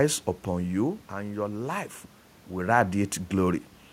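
No technical faults are audible.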